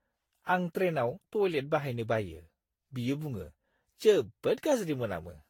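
Throughout this speech recording the sound is swirly, smeared and hollow, with blurred attacks and nothing above 19.5 kHz. This is generation loss, likely from around ten lossy re-encodes, which fits a Vorbis chain near 70 kbit/s, with quantisation noise and spectral holes compounding.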